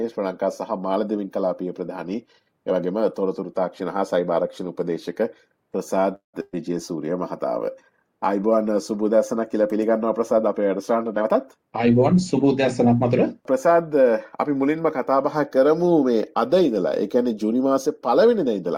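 At 6.15 s the audio stops advancing for about 0.2 s, until 6.36 s. The last sound is stretched into a short tone that fades, reaching silence for roughly 130 ms before playback picks up exactly where it left off. Nothing is skipped, but everything after this point arrives about 182 ms later than before. This is a call audio freeze, likely caused by packets stalling in transit until the jitter buffer ran dry.

Almost immediately after, from 6.42 to 6.56 s, comes a burst of packet loss. About 120 ms of audio never arrived in time. The receiver covered the gap by carrying the previous sound forward for about 111 ms, decaying it with a brief drop to near silence. Playback then resumes further along, so the segment in between is simply gone rather than delayed.

Between 11.17 and 13.12 s a jitter buffer speed-up is audible. The buffer was holding more audio than its target, so the receiver trimmed out short pitch-period-sized slices repeatedly to catch up. 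Roughly 0.2 s is removed over this stretch, so the sound plays at about 109% speed. The pitch stays the same, but the pacing feels noticeably rushed until it settles after 13.12 s.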